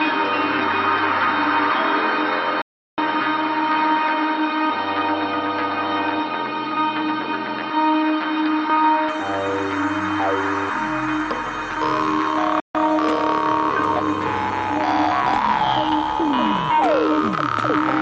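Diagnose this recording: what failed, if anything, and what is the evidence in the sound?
Input stage, likely an input switched to a poorer device: until 9.09 s the band stops near 5.6 kHz, noise sits roughly 35 dB down, and level jumps about 5 dB without a gap.

Broadcast reception, digital broadcast dropout: muting with 3 ms fades at 2.62–2.98 s (360 ms) and 12.60–12.75 s (144 ms), consistent with whole failed frames of about 24 ms.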